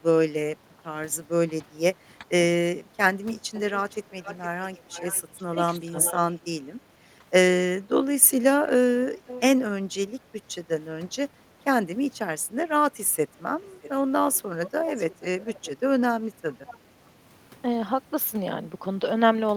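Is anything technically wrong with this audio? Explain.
Yes. The speech shows two recurring faults, both likely from an echo canceller on a speakerphone call.

Speech suppressed in double talk occurs from 1.62 to 3.56 s, at 5.86 to 5.95 s, and from 13.32 to 15.99 s. The voice dips briefly, by roughly 10 dB and once by roughly 20 dB. This is likely the canceller ducking everything when both ends talk at once.

Echo leak occurs from 3.55 to 6.38 s, 8.29 to 9.41 s and 13.62 to 16.77 s. A faint delayed copy, about 15 dB below the speech, trails at 455, 531 and 620 ms. It is likely residual loudspeaker pickup the canceller missed.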